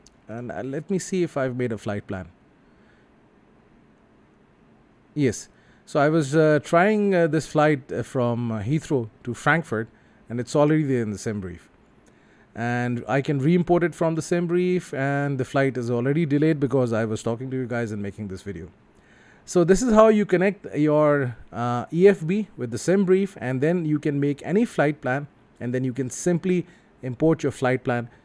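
Nothing stood out as a technical problem on listening.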